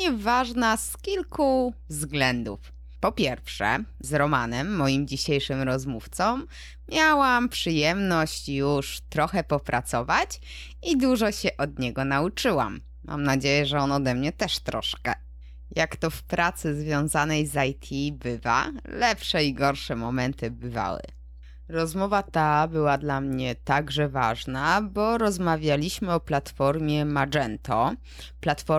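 Speech runs over mains hum for the whole clip: a steady 60 Hz tone, roughly 20 dB below the voice, leaking in through a ground loop or nearby transformer. A spectrogram shows an unbroken horizontal line at 60 Hz, with some low harmonics above it, continuing through the pauses.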